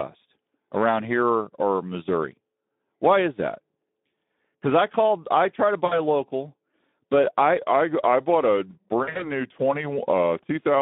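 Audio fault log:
Throughout: Speex codec. The speech carries the plainly audible damage of low-rate CELP coding, roughly 11 kbps. With so few bits left for the excitation, voiced sounds come out hoarse and grainy, as the codec approximates rather than reproduces the waveform. The band is confined to about 200 Hz to 3.7 kHz, so the top end sounds dull and telephone-like. Sibilants lose their crispness.
5.85 to 6.0 s, and 9.03 to 9.31 s: VoIP packet loss concealed by the speech codec. In the first event about 60 ms of audio goes missing. The decoder repeats its last pitch and spectral shape at falling gain, so the speech smears into a brief, fading sound. In the second, about 120 ms is lost in scattered gaps over roughly 160 ms, the longest run 60 ms. The speech sounds weak and blurred until the decoder recovers.
7.58 s to the end: section at the wrong speed. From this point the speech runs at about 0.89 times its proper rate, so it becomes slower and deeper together. 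The pitch drops by around two semitones, lending a sluggish, lowered character. Because speed and pitch shift as a pair and the change arrives abruptly mid-clip, the likely cause is this stretch being played out against the wrong clock, as an editor or player resampling mismatch would do.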